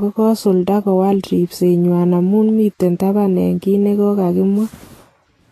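Speech, and the whole thing carries Vorbis compression damage that's plainly audible: the top end stops dead around 14.2 kHz, and the treble has gone hissy and grainy with smeared consonant edges. That's likely a low-bitrate Vorbis encode, something in the region of 32 kbps.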